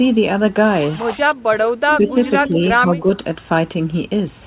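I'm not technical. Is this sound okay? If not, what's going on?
No. The speech briefly dips in level at 1.34–1.38, 1.81–2.11, 2.48–2.59 and 2.85–3.06 seconds. That's likely speech suppressed in double talk: the other person talked at the same time, and the call's echo canceller turned this talker down along with the echo.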